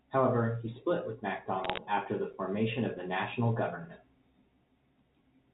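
Between 1.64 and 1.78 s, after "he split with", bit errors on a digital phone line corrupt single A-law samples, adding sharp ticking crackle over unchanged speech.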